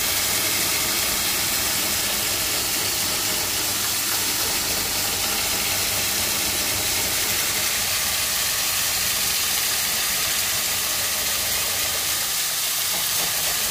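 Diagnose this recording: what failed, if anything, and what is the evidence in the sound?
Doubled audio track throughout: an equally loud, undecayed copy trails about 0.3 s behind, likely a second, slower capture path; spectrograms show every onset twice.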